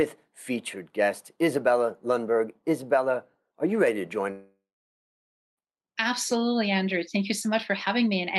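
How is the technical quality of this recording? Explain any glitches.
The recording has one real glitch, heard over the call codec's band-limited sound, which tops out around 12 kHz and fits an Opus call path. From 4.31 to 5.59 s there's a long network dropout. The audio likely stopped arriving, so the receiver stretched the last bit of sound into a fading buzz before it settled into nearly a second of silence. When the audio resumes, that stretch of the speech is simply gone.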